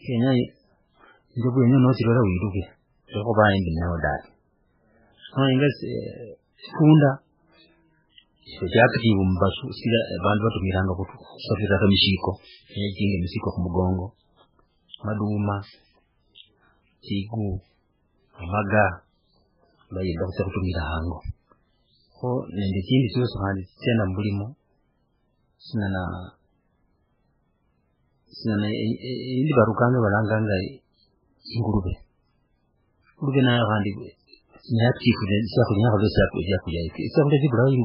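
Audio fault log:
throughout, MP3 compression: the speech has nothing above about 5.2 kHz, and the damage is heavy, with a watery, swirling texture across the whole clip. Weak spectral detail appears to come and go from frame to frame, so sibilants turn into metallic chirps and consonant onsets smear. The cause is likely a very low-bitrate MP3 encode, around 8 kbps, where the encoder drops the treble at a fixed point and discards quiet frequency components it cannot afford.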